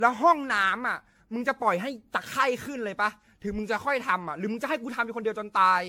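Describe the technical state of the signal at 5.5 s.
At 5.5 s the speech shows generation loss, present across the whole clip. It sounds swirly, smeared and hollow, with blurred attacks. The likely cause is repeated lossy re-encoding, perhaps around fifteen passes of an AAC-type codec near 96 kbit/s, each adding fresh quantisation noise and spectral holes.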